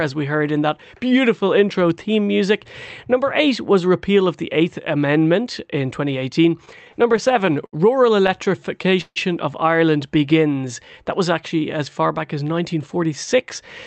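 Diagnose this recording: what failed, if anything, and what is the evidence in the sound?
The network side is where this one breaks. Between 6.65 and 7.75 s and again from 8.27 to 9.18 s there are repeated stalls (stutter). Packets showed up late, the jitter buffer kept running dry, and the receiver stretched the last sound to cover 11 and then 7 gaps, up to 148 ms long.

Right after that, from 10.18 to 12.48 s, you get a jitter buffer slow-down. The buffer was rebuilding its reserve by repeating pitch periods, adding 237 ms, so the speech plays at roughly 90% speed with the same pitch and drawn-out sounds, all on top of the Opus path's 8 kHz band limit.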